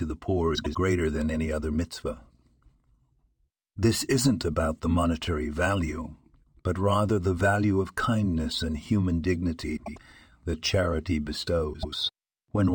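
Frames out of order at 0.55, 9.76 and 11.73 s, after "the poor", "of kindness and human" and "that charity". Two adjacent 96 ms blocks play swapped, a garbled flutter.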